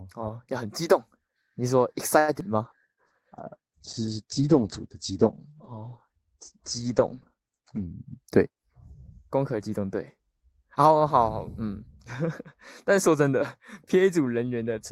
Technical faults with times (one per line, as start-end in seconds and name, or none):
0.00-14.91 channel delay (comb filtering)
2.19-2.30 short stall from a late packet
2.40-2.43 short concealed packet loss
2.64-8.10 call bitrate drop
8.05-8.72 jitter buffer speed-up